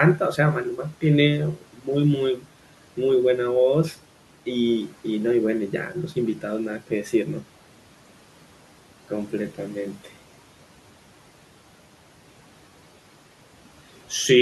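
At 1.56 to 1.88 s and again at 2.37 to 2.46 s, parts of the speech turn faint and swallowed, dipping by as much as about 12 dB, with roughly 150 ms and 100 ms actually affected. This is speech cut by the noise suppressor: it mistook quiet stretches of speech for the room noise, which sits about 22 dB below the speech, and turned them down along with it.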